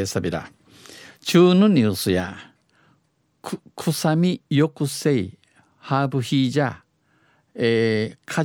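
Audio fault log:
2.2 s to the end of the clip, sudden gain jump: a digital gain setting was likely applied in a single step rather than ramped, so the level of the speech drops by about 4 dB from one sample to the next at 2.2 s and stays there. Because the change acts on the whole signal, the background noise falls by the same amount at the same moment, which is what separates this step from a talker simply getting quieter.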